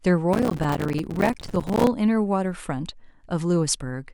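Processor overload crackle runs from 0.33 to 1.87 s: the processor repeatedly missed its deadlines for small buffers of around 5 ms, around a hundred of them, and each miss dropped a hard-edged sliver of silence into the speech, producing a gritty, tearing crackle until the load eased.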